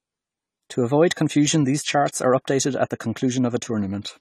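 Throughout, the speech sounds dull and fizzy, with nothing above 14 kHz. This is likely AAC compression. The sound fits a bitrate near 32 kbps.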